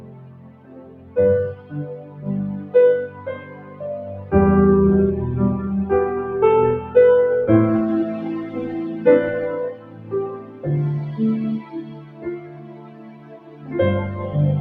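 A noise suppressor applied to music or sounds is active throughout. It was tuned for speech, so it mistakes steady tones, ambience and reverb for noise and pulls them down, swinging the level by roughly 15 dB. Held sound pumps and thins, and a spectrogram shows sustained bands fading while onsets stay bright.

Sound is cut by the noise suppressor at 0.0–1.16, 1.55–1.73, 1.91–2.28, 2.56–2.74, 3.08–3.82, 9.74–10.13, 10.36–10.65 and 11.61–13.73 s, dropping about 8 to 10 dB. The waveform envelope sags after each attack and tails end abruptly.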